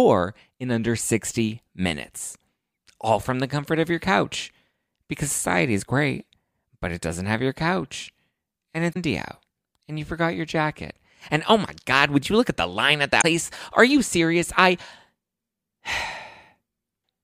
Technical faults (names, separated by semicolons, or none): damaged data in a compressed stream